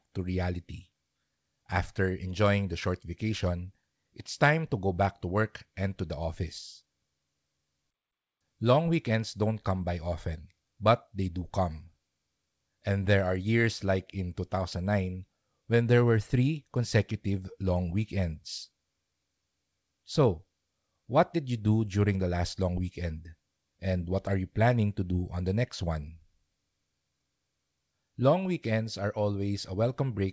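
Nothing's actually wrong in this speech recording; it simply came over a call link that fits a G.722 codec, which is why there's nothing above 8 kHz, and that's just how that path normally sounds.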